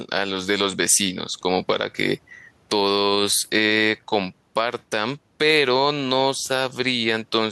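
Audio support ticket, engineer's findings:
Background breathing up in pauses, ducking under each loud syllable, around 5 dB swing, throughout; speech squashed. Gain pumping, likely input gain set too high with a fast limiter clamping peaks. Room noise sits about 41 dB under speech.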